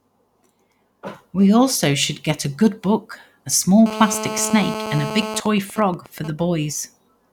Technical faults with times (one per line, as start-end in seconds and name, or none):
3.86-5.40 GSM phone buzz
5.46-6.30 GSM signalling bursts